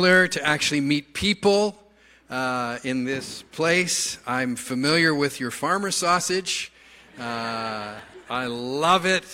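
Dropped buffer (overrun) at 6.48 s and again at 7.99 s: each is a small jump forward, likely where samples were overwritten before being read, splicing the audio directly across a gap of roughly 5 ms and then about 10 ms, with no silence between.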